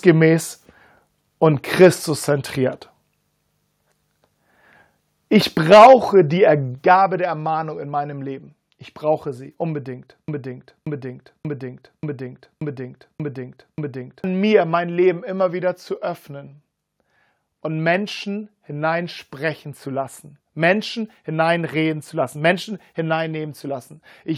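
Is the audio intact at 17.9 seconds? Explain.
Yes, the audio at 17.9 seconds is intact, with no audible fault at that moment.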